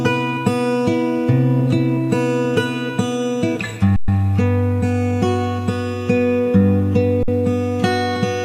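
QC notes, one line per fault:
3.96–4.08 s, underrun with held sample: the sound stops dead for 120 ms with barely a click, then carries on softly where it left off. The output buffer ran dry, and the converter froze on its last value, leaving a flat line.
7.23–7.28 s, underrun with held sample: the same flat hold, shorter at about 51 ms. Nothing is skipped, so the restart is gentle.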